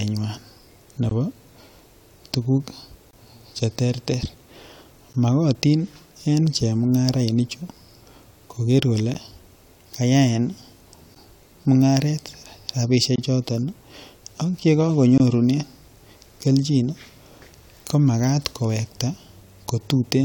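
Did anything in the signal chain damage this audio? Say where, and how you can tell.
Yes. The damage happens at playback of a segmented stream: a gap between stream segments. Hard-edged holes of about 13 to 25 ms cut into the speech at 1.09, 3.11, 5.13, 11.15, 13.16 and 15.18 s, on a grid of about 2 s that matches 2-second segments. Segment timestamps leave a small gap, and the player fills it with silence. A spectrogram shows thin, fully blank vertical stripes, and the waveform drops abruptly to silence.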